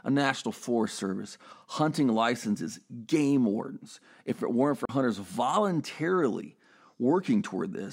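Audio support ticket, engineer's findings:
Speech cuts out around 4.85 to 4.89 s, a short silent hole of roughly 37 ms. Then the speech comes back further along, as if it kept playing through the gap. Likely a Bluetooth dropout: audio packets didn't reach the headphones in time, got dropped, and the output sat silent until good ones arrived. The gap length fits a couple of lost packets.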